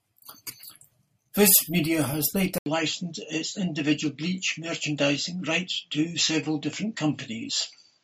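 An input switched to a poorer device at 2.58 s in this speech clip: after a silence of 80 ms, the sound runs to the end with nothing above 7.6 kHz, a drop of roughly 5 dB and a new noise floor around 50 dB down, likely another microphone taking over.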